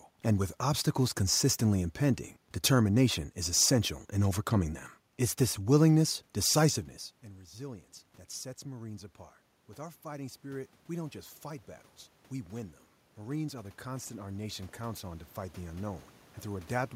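From 12.5 s to 16.1 s you can hear automatic gain rising. The gain control decided the input had gone too quiet and slowly turned itself up, by about 7 dB over those 3.6 seconds. The room noise comes up right along with the speech, so the whole background swells instead of just the talker getting louder. That's different from the level change around six and a half seconds, which is just the talker shifting position.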